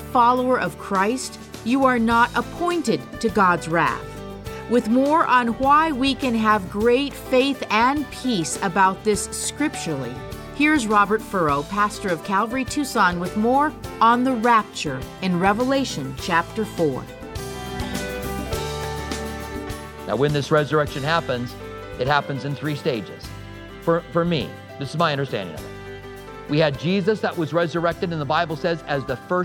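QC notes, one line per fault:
No technical faults are audible anywhere in the clip.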